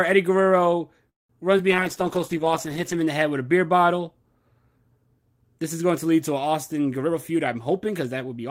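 A call audio freeze at 1.09 to 1.31 s stops the sound: a brief fading continuation, then about 0.18 s of silence, and the speech resumes where it left off with nothing lost. A jitter buffer that ran empty while packets were held up is the likely cause, and it inserted a gap of about 0.2 s.

Short concealed packet loss follows at 1.57 to 1.60 s. About 20 ms of audio never reached the decoder in time. The receiver covered part of the hole by extending the preceding sound, leaving a quick smear or wobble where a fragment simply drops out.

A call bitrate drop runs from 1.72 to 3.08 s, ending just before "the head with a". The encoder was pushed from 32 to 10 kbps and stayed at the lowest rate for 1.29 s. Speech turns rough and muffled, with the high frequencies trimmed away.

A jitter buffer speed-up spans 7.02 to 8.41 s. Excess buffered audio was trimmed by repeatedly cutting out pitch-period-sized slices, about 0.15 s in total. 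The speech plays at roughly 110 percent speed at unchanged pitch, so it sounds hurried.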